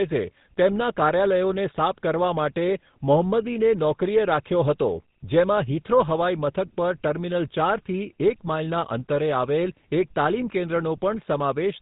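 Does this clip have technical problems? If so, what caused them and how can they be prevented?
Yes. The speech sounds buzzy and gravelly throughout, with nothing above 4 kHz, from the GSM full-rate codec's pulse-driven vocal-tract model at 13 kbps. Prevent it by recording or transmitting through a wideband codec instead.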